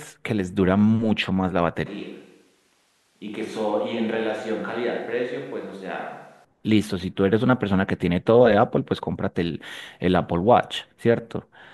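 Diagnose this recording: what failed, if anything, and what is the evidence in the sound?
From 1.86 s to 6.45 s the speech turns roomy and hollow in one step. It loses bass and drops by about 10 dB. Room noise sits roughly 35 dB under the speech. At 6.45 s the close, full sound snaps back. The cause is likely a switch to a distant microphone at the capture stage. The close microphone's feed dropped out, and a mic further away, such as a camera's, carried the recording for that stretch.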